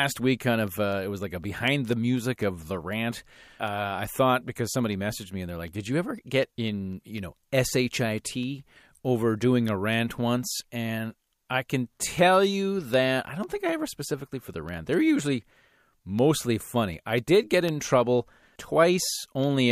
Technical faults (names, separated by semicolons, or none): periodic USB or driver dropouts